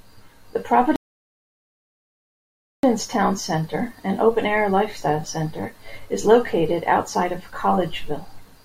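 A rebuffering stall interrupts this speech clip from 0.96 to 2.84 s: playback falls silent for about 1.87 s because the player exhausted its downloaded audio, then picks up exactly where it halted. Unlike a dropout, no speech is missing; the stall only adds time.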